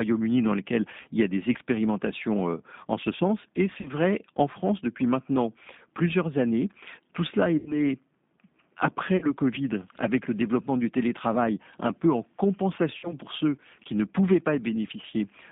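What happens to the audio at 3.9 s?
VoIP packet loss concealed by the speech codec occurs from 3.81 to 3.89 s, just before "vrai en". The decoder repeats its last pitch and vocal tract filter at falling gain, so the gap becomes a brief, fading smear. The length of about 40 ms fits four missing 10 ms frames. Here, as throughout, the G.729 codec limits the audio to 150 Hz–3.7 kHz and rebuilds speech from sparse pulses, giving a plainly rough, synthetic edge.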